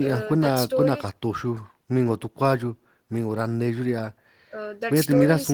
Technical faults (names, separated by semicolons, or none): none